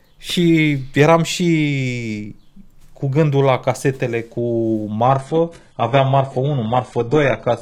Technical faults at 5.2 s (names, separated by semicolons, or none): adaptive stream at a lower bitrate